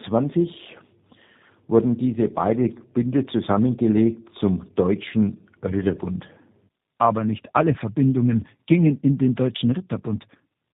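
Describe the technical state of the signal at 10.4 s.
At 10.4 s you're hearing tandem speech coding, and it runs through the whole clip. The sound went through two low-rate speech coders in a row, consistent with AMR-NB and then G.729A, with the second re-encoding the first's already damaged output. So the speech sounds rough, muffled and warbly, worse than one coder alone would make it, and there's nothing above about 3.8 kHz.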